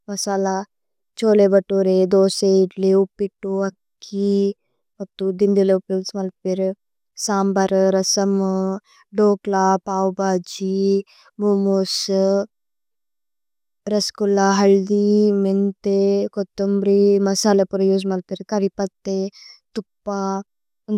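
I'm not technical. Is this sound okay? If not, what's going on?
Yes, it sounds fine.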